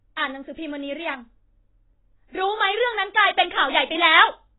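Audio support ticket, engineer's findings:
Speech dull and smeared throughout, nothing above 3.9 kHz. Likely AAC compression at very low bitrate, fitting about 16 kbps. Quantisation leaves warbly sibilants.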